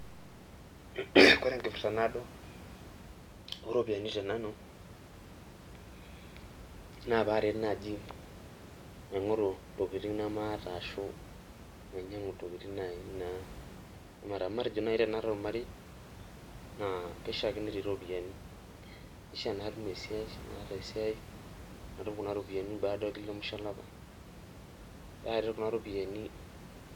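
No technical faults are audible.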